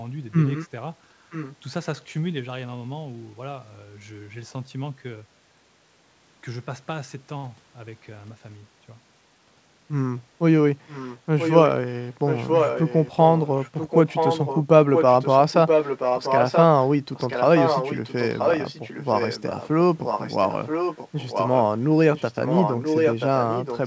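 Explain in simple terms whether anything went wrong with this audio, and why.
You can hear an echo leak. The speech comes back about a second late, faintly at 0.54 and 1.3 s, then loudly at 10.87, 12.07, 20.04 and 22.15 s, likely from a speakerphone whose echo canceller let some through.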